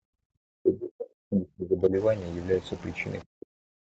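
A speech clip recorded through call microphone processing, with nothing above 8 kHz. From 0.0 to 0.31 s the room sound drops by about 40 dB for roughly a third of a second. This is background gated by the echo canceller. While the far-end loudspeaker plays, the canceller pulls the microphone down hard, and the room tone returns once it releases. From 0.59 to 1.95 s, and again from 3.26 s to the end, the talker's voice sinks by about 40 dB in places. Over the first stretch, about 1.5 s is affected. The likely cause is speech suppressed in double talk. Both sides spoke at once. The canceller could not tell the near talker from the loudspeaker echo, so it turned both down together.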